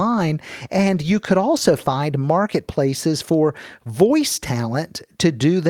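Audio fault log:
No faults found anywhere in this speech recording.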